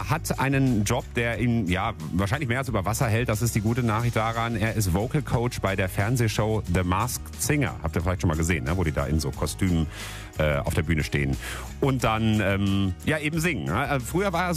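No technical faults can be heard anywhere here.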